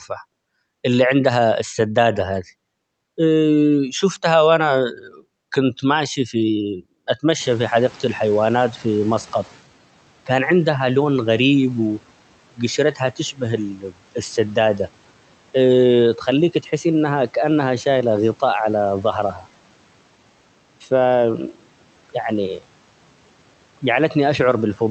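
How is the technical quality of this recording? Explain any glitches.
One glitch stands out, set off by a sudden jump of about 23 dB in the room's background noise around 7.5 s. The speech comes through a call path whose top end stops near 8 kHz.

From 7.39 to 9.61 s, the newly louder background noise comes through with less reduction at first, then sinks by about 9 dB over 2.2 s. This is the noise suppressor catching up: its noise estimate lagged behind the sudden rise, so full reduction arrived only gradually.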